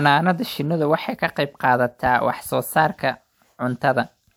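Nothing in the speech stood out as a technical problem on listening.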